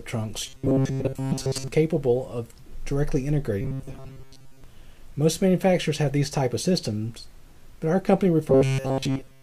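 From 0.46 to 1.68 s, 3.61 to 4.64 s and 8.50 s to the end, robotic sound from repeated short buffers turns the audio into a rigid 134 Hz buzz, likely from most of the audio being skipped while a roughly 7.5 ms buffer repeats. A spectrogram shows evenly spaced 134 Hz harmonic lines, and the waveform shows identical short cycles.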